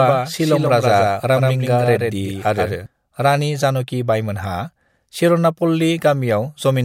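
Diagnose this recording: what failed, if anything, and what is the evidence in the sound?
A doubled audio track runs from the start of the clip until 2.86 s: a second, full-band copy of the speech trails the original by around 150 ms at roughly 5 dB lower, with no decay or room colouring. It is already present at 0 s and drops out abruptly at 2.86 s. The fixed offset and clean copy point to the same signal reaching the mix twice, most likely via a slower second capture path or two misaligned copies left in an edit.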